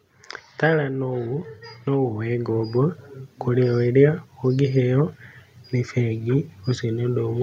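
From 0.8 s to 3.7 s the automatic gain control misjudges the speech level as too low and keeps turning its gain up, climbing about 8 dB over almost three seconds. Because the gain acts on the whole signal, the talker and the room or background noise swell together. The level creeps upward rather than jumping, so the speech seems to draw steadily closer and louder while the noise floor rises underneath it.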